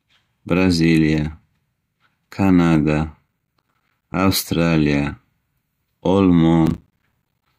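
From 3.28 to 4.14 s and again from 6.66 to 7.46 s there's processor overload crackle: the machine kept missing buffer deadlines, each of around 10 ms, dropping in short hard-edged silences roughly 20 and 30 times respectively, so the speech gets torn into gritty crackle.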